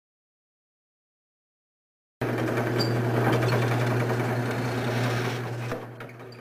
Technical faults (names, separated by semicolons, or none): audio dropout to silence